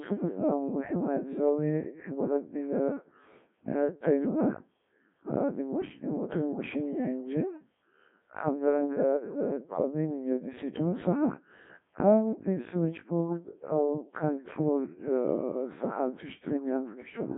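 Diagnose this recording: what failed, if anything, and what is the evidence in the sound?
The codec stage failed: the speech passed through the Codec 2 vocoder for the whole clip. It sounds robotic and buzzy, band-limited to roughly 150 Hz–3.6 kHz, with nothing above 3.8 kHz. The decoder rebuilds the voice from sine waves driven by pitch and envelope parameters, and the heavy degradation fits a rate near 1.3 kbit/s.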